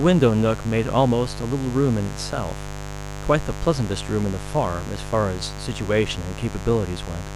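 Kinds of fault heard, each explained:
Mains buzz: a steady, raspy buzz at 50 Hz sits under the speech for the whole clip, fairly loud against it. Switching spikes arrive twice per mains cycle. A spectrogram shows evenly spaced horizontal harmonic lines reaching several kHz, and the waveform shows sharp repeating spikes.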